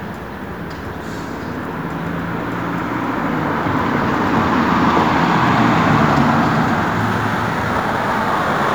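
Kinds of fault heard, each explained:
Crude rate conversion: Near the end, from 7.0 s to the close, the sample rate was changed by simply keeping the nearest existing sample and dropping the rest, with no filtering, which fits a 48 kHz to 44.1 kHz conversion. Those skips fall in a fixed repeating pattern, so they create stray tones unrelated to the material, roughly 30 dB below it. They come through as a faint gritty, inharmonic fizz riding on the louder and brighter parts of the sound.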